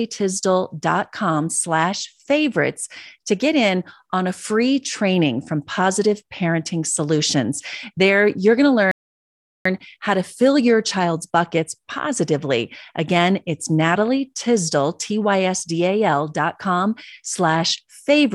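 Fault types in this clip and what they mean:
Playback stall: The speech cuts out in mid-flow at 8.91 s and the output stays silent until 9.65 s. That is a gap of about 0.74 s. The sound then carries on again. The silence does not sound like a natural pause. It breaks off abruptly and holds for a noticeable time. The likely cause is the player running short of data, or its playback thread being blocked, until it recovered.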